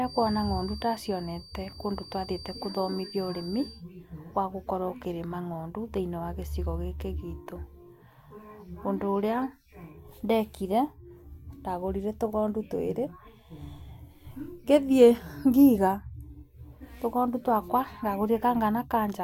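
From 0 to 3.85 s, the loudspeaker-to-microphone loop is likely held right at the edge of feedback, so one tone near 4.7 kHz keeps ringing without growing. It comes through as a feedback whistle, thin and steady, around 20 dB beneath the speech, swelling and fading slowly in level.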